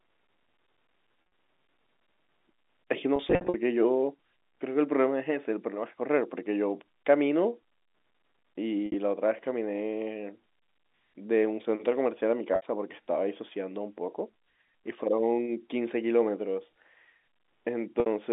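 Speech over a G.711 telephone line, band-limited to roughly 250 Hz to 3.7 kHz, with packet loss with pitch repetition at 1.22–1.32 s, 3.16–3.54 s, 8.86–8.94 s, 12.54–12.64 s and 18.0–18.06 s. Each time, the receiver papers over missing audio by replaying the last pitch cycle, so you hear a brief held, buzzy smear. The worst patch is around 3.2–3.5 s, where about 240 ms goes missing across 380 ms. Elsewhere it's 60–80 ms, in runs no longer than 60 ms.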